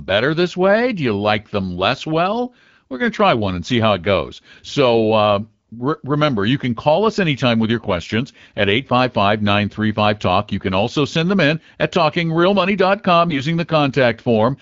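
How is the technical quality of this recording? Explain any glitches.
The speech is carried by the AMR wideband (HD Voice) codec at 12.65 kbit/s, with light codec damage. Two brief glitches stand out. Both are AMR bit errors. They occur from 7.76 to 7.90 s and from 13.28 to 13.42 s. The less protected bits in a few frames arrived flipped, so the excitation pulses land in the wrong places. The finer pitch, gain and spectrum values are also off. Pitch and level hold, but the voice turns hoarse, scratchy and gargly. The second burst has a higher error rate, roughly 10 percent against about 4 percent.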